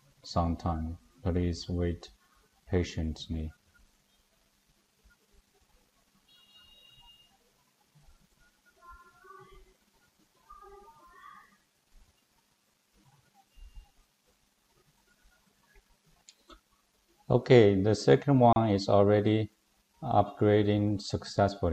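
A gap at a join of encoded pieces opens at 18.53 s and lasts about 33 ms: the continuous audio drops to silence with smeared edges, then resumes where it stopped. Separately encoded segments were joined untrimmed, keeping encoder delay and end-frame padding.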